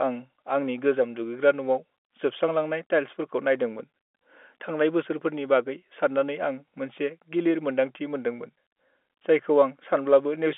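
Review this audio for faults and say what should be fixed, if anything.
Nothing here needs fixing: the speech sits in the narrow band of an ordinary G.711 telephone line, roughly 250 Hz to 3.5 kHz, which fits a 64 kbps mu-law path working as intended.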